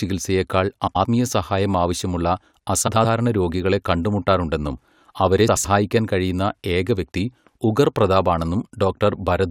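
Speech with frames out of order at 0.87–1.05 s, 2.87–3.06 s (just before "രോഗികളെ കണ്ടുമുട്ടാറുണ്ടെന്നും അവരെ") and 5.48–5.66 s (just after it). In each, two roughly 85 ms halves, which fits four-frame runs, play swapped, giving a garbled flutter. Unlike a dropout, nothing is missing.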